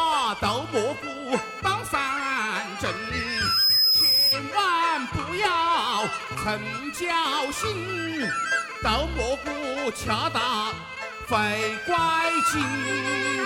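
At 3.14 s a microphone starts picking up the loudspeaker it feeds, and around 5.1 kHz the loop gain climbs past one. That frequency reinforces itself on every pass, so the loudspeaker feedback squeal swells over roughly half a second into a piercing, steady tone that sits about 5 dB above the rest of the sound. It holds until 4.41 s, when the squeal stops.

While the squeal is still sounding, at 3.83 s, the decoder fails to play some compressed frames, either because they are missing or because they were rejected as damaged. The gap points to a couple of 26.1 ms frames, so around 50 ms of audio is lost and the sound jumps forward.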